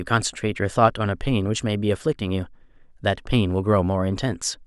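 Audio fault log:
No fault in this speech clip.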